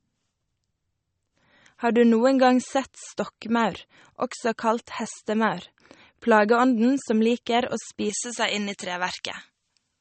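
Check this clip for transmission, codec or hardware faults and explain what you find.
Two faults are present in this speech clip: one runs through the whole recording, and the other affects only its final stretch.

Low-bitrate audio saved at a high bitrate, throughout: nothing is present above 8.4 kHz, and the artefacts of the first MP3 encode remain. This likely comes from a lossy encode near 32 kbit/s later re-saved around 320 kbit/s. The larger file cannot restore the discarded detail.

Pre-emphasis left on, from 8.09 s to the end: a treble lift matching the J.17 curve, about 11 dB at 10 kHz relative to 1 kHz, was never reversed by its complementary de-emphasis. The speech turns thin, bright and hissy, with sharpened sibilants.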